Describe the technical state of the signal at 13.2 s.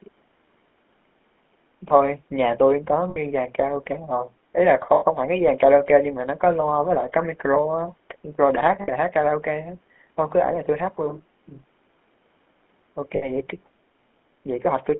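Lost GSM frames occur from 13.16 to 13.26 s. The last good frame's settings are repeated, holding the sound as a rough metallic ring rather than the clean gap of a dropout. The 60 ms loss fits three 20 ms frames. Underneath, the GSM full-rate codec runs throughout. Its plainly audible buzzy, gravelly roughness within a 200 Hz to 3.4 kHz band points to the 13 kbps codec rather than generic band-limiting.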